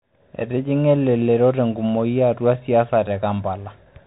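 From start to end the speech carries the sound of a Bluetooth CVSD headset codec, which fits a 64 kbps stream. Each sample is coded as a single up-or-down step that adapts in size, so nothing above 3.8 kHz survives, s sounds turn scratchy, loud bright passages distort, and a granular hiss sits underneath.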